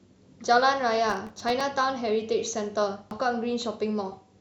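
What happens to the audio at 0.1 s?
Nothing goes wrong at 0.1 s; the speech plays through that moment intact, with no dropout, click or distortion.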